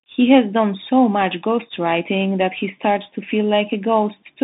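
Speech squeezed through a Bluetooth CVSD headset codec the whole way through: the band runs roughly 150 Hz to 3.7 kHz with nothing above 3.8 kHz, and the one-bit up/down coding, which fits a 64 kbps link, leaves plainly audible granular hiss, scratchy s sounds and slope-overload distortion.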